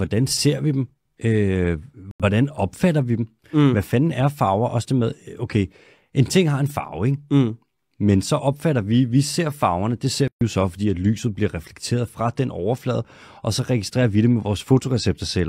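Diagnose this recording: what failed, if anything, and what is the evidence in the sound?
A digital broadcast dropout hits the speech at 2.11 s and lasts until 2.24 s, ending just before "opfatter vi dem". The receiver muted because frames failed to decode, and the roughly 85 ms of lost sound is consistent with two missing frames. That material is gone rather than delayed. On a waveform the trace collapses to a flat line for about 0.13 s. On a spectrogram it shows as a clean vertical gap across all frequencies, with speech energy resuming abruptly after it.

A playback stall opens a 134 ms silence from 10.28 s to 10.41 s, between "ser farverne det ser" and "jo så fordi at". Speech halts mid-flow and then picks up again, which points to the playback stage. The likely cause is the player's buffer running dry or its output thread being blocked until data arrived. The waveform shows a hard-edged flat segment. 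The spectrogram shows a blank full-band column with abrupt borders on both sides.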